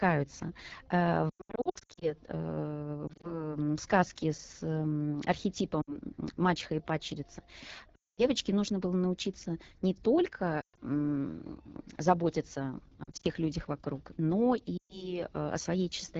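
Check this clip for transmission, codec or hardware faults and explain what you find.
Two faults are audible in this speech. Throughout, the sound is rough and raspy. This is the AMR wideband (HD Voice) codec, running at a rate that fits its low 8.85 kbit/s mode, where the pulse-driven vocal tract model is too coarse to carry speech cleanly.

Lost AMR speech frames cause warbles, quick drops to near silence and weak, rough recoveries at 1.30 to 2.14 s, 3.08 to 3.53 s, and 5.81 to 5.97 s, just before "мачеха и падчерица". Further losses fall at 7.95 to 8.24 s, between "мачеха и падчерица" and "нужно было научиться не", and at 10.61 to 10.79 s, 13.03 to 13.27 s, and 14.77 to 15.19 s after "людях вокруг но". The decoder replays the last good settings with falling gain.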